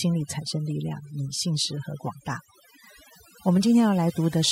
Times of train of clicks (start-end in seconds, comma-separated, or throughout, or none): none